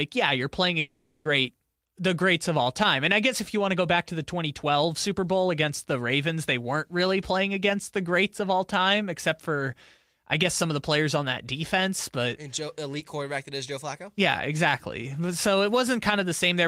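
From 0.79 s to 1.27 s the speech gives way to a fading buzzy continuation, with about 460 ms of audio lost, likely from a long network dropout.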